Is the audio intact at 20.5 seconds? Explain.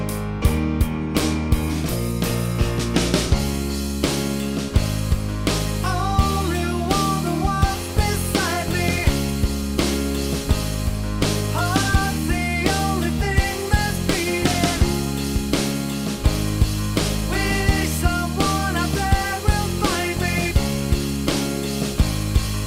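No. At 20.5 s a steady, fixed-pitch whine at 1 kHz sits faintly under the sound, well below it, from 16.59 to 20.90 s. This is USB whine: current drawn in the bus's 1 ms frames leaks through power or ground into the audio path.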